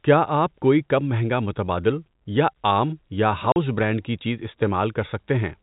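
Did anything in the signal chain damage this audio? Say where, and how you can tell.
Yes: packet loss filled with silence at 3.52 to 3.56 s, between "متبادل یا عام یا" and "برانڈ کی چیز". It is a network fault. A 40 ms hole with hard edges cuts the speech, which fits two lost 20 ms packets that the receiver replaced with silence.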